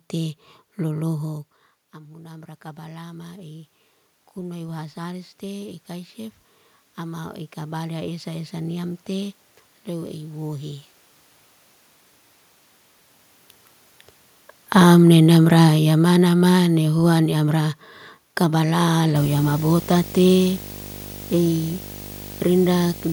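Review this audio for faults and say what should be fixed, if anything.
Automatic gain rising occurs three times: 1.24 to 3.78 s, 4.46 to 6.46 s, and 6.97 to 10.88 s. Shortly after the talker moves away from the microphone around 1.0 s, the input drops by about 16 dB. The gain control then ramps up by about 6 dB, about 4 dB and about 5 dB in turn. Speech and room noise swell together over one to four seconds. Prevention: use a slower, range-limited AGC or fixed gain with consistent mic placement.

Automatic gain falling runs from 14.61 to 17.7 s. After the talker moves again around 12.5 s, the gain control finds the input too loud or its background noise too strong. The gain control then pulls down by about 6 dB over roughly three seconds, so the speech starts loud and sinks along with the background noise under it. This is the same control loop chasing talker distance rather than a stable source. 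Prevention: limit AGC attack depth and keep talker distance steady.

Video or display buzz starts at 19.15 s and continues to the end. It is a 50 Hz buzz at the picture's field rate, with harmonic hash above it and a whine at 15.6 kHz from the line scan. It sits roughly 15 dB below the speech, which points to a monitor or video cable coupling into the microphone line or its ground. Prevention: reroute and shield the audio cabling away from the display and break any shared ground path.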